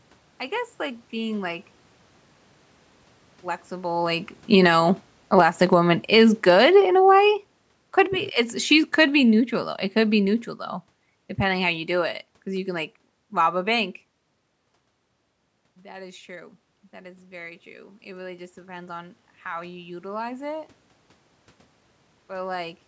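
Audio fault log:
4.38 to 12.23 s, automatic gain falling: Just after the talker comes closer to the microphone at around 4 s, the whole sound sinks slowly over nearly eight seconds, voice and room noise fading together until the level sits about 14 dB lower. The automatic gain control judged the louder input as too hot and eased its gain down step by step, which is why the background drops along with the speech rather than staying put.
15.81 to 20.73 s, automatic gain rising: After the talker moves back from the microphone at around 14 s and the input falls by about 17 dB, the level climbs gradually over roughly five seconds, with voice and room noise swelling together. The automatic gain control heard a quiet input and raised its gain by about 8 dB, recovering only part of the drop, so the speech ends up somewhat quieter than before the move while the background is pushed up with it.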